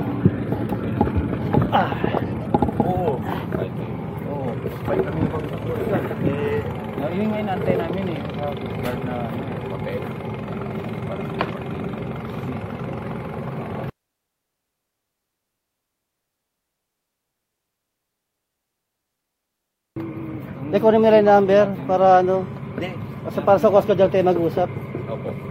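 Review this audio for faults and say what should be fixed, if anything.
Nothing in the clip calls for a fix. No repair or prevention step is needed.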